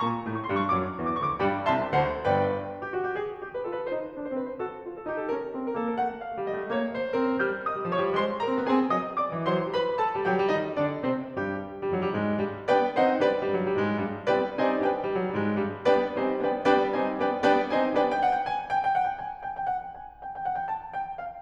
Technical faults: none

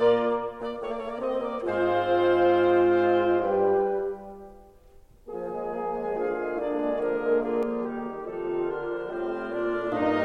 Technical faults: channel delay (comb filtering)

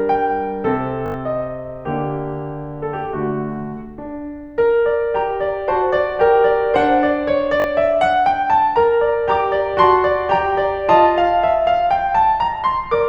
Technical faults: repeated buffer

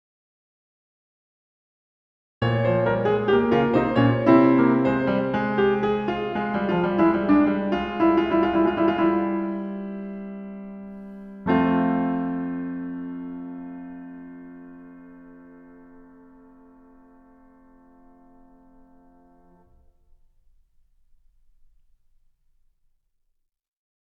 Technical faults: audio dropout to silence

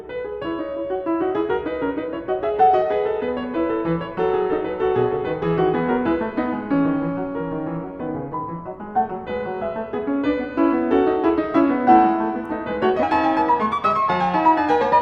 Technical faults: section at the wrong speed

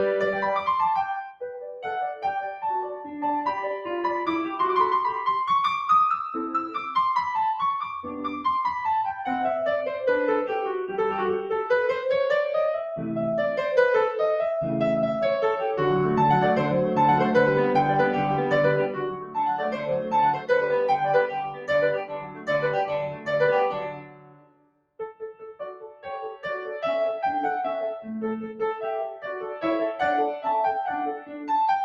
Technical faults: noise suppressor applied to music or sounds; sound cut by the noise suppressor

